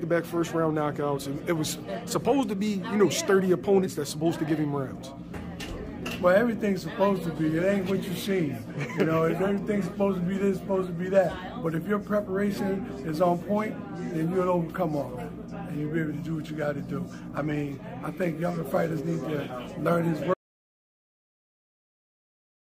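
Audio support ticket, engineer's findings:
Audio dropout to silence, likely input loss (device disconnect or link failure) with recorder writing silence. Sound cuts at 20.34 s; silence, no room tone, through end of clip.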